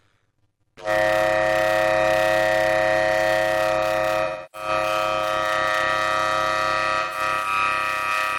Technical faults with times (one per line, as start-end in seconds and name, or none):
0.00-8.38 block size mismatch (padded)
4.23-4.68 AAC frame loss with concealment
7.01-7.20 AAC frame loss with concealment